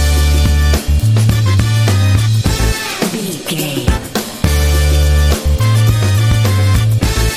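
No technical faults can be heard anywhere in the clip. There is no point in the sound that needs a time stamp or an explanation.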